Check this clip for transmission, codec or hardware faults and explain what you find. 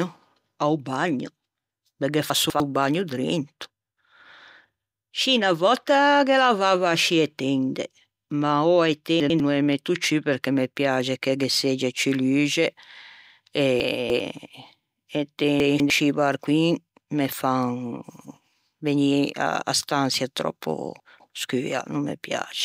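Five chunks-out-of-order faults occur in this speech, at 2.3 to 2.6 s, 9.2 to 9.4 s, 13.8 to 14.2 s, 15.6 to 15.9 s and 21.0 to 21.3 s. The landmarks are just before "no ê metto", just before "scî barcoin me", and just after "stançia tròppo". A 100 ms chunk plays one to three chunks late. Nothing is lost, but the hard joins give a jumbled moment.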